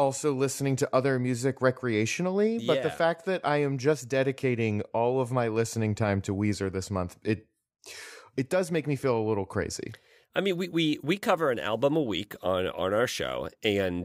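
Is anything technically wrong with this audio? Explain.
No, no technical faults detected.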